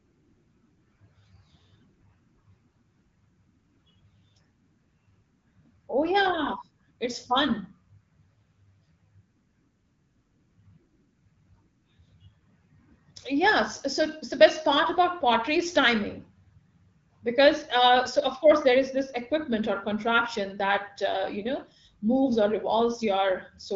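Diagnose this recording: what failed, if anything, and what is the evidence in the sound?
Nothing failed: the speech arrives through an AMR wideband (HD Voice) path whose light coding texture and empty band above 7.5 kHz fit the normal 12.65 kbit/s mode, and no stage from capture to playback shows a defect.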